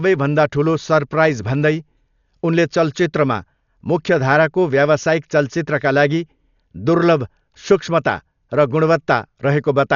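From start to finish the speech sounds dull and boxed in, with nothing above about 6.9 kHz, and a rough, fluttering hiss clings to voiced sounds. This is heavy codec damage, likely from Dolby Digital compression at a very low bitrate, one that fits roughly 48 kbps. Starved of bits, the encoder narrowed the band and left many frequency lines with no detail. The decoder then filled those gaps with noise, which is the grainy flutter around the voice.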